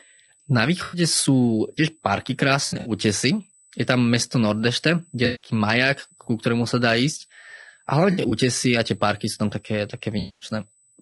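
A thin, steady whine at 8 kHz sits about 35 dB below the speech throughout. This is USB whine, the bus's 125-microsecond microframe current leaking into the audio through power or ground. The speech also sounds rough and grainy, with noise filling the gaps between harmonics, most likely from low-delay AAC compression (AAC-ELD), coded at a low bitrate around 32 kbps. Smeared, noisy patches appear at 0.83–1.01 s, 2.65–2.91 s, 5.25–5.49 s, 8.11–8.32 s and 10.19–10.49 s. These are AAC frame loss with concealment: the decoder rebuilt roughly 100 to 220 ms of missing audio from the last good spectrum. At 2.65 s and 8.11 s the gaps are scattered across about 200 ms, in runs of up to roughly 70 ms.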